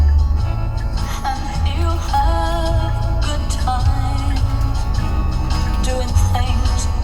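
No technical faults can be heard in this recording of sounds. Nothing in the audio points to a problem in how it was captured, processed or played back.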